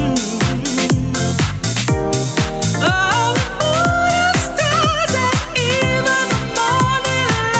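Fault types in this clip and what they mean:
gain pumping: The level is pulled down under each loud sound, throughout the clip. The swing is around 5 dB. Loud and soft parts sit close together. The likely cause is input gain set too high, with a fast limiter pulling it back.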